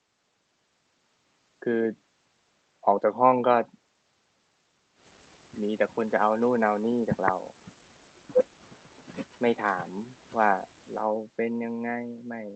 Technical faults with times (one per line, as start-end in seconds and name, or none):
none